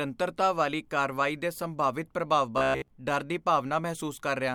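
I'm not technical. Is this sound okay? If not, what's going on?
No. From about 2.58 to 2.88 s the speech turns into a stiff, metallic buzz around 67 Hz: robotic sound from repeated short buffers. New audio likely arrived too slowly, so most of that stretch is a tiny snippet, roughly 15 ms long, repeated over and over while the real speech was skipped.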